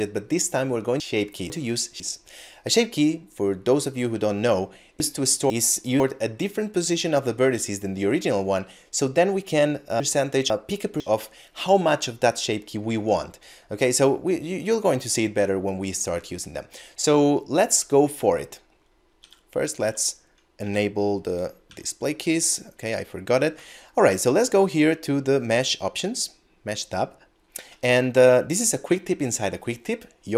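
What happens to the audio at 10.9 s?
At 10.9 s you're inside a chunks-out-of-order swap running 10.0 to 11.0 s: a half-second chunk arrived late and plays after its successor, so the sound jumps around.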